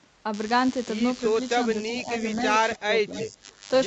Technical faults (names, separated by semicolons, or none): DECT cordless phone buzz; speech suppressed in double talk; echo leak